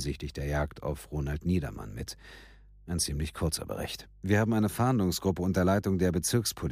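A ground loop or a nearby transformer is leaking the 50 Hz power line into the signal path from start to finish, producing mains hum: a steady low drone at 50 Hz with some low harmonics, sitting roughly 25 dB beneath the wanted sound.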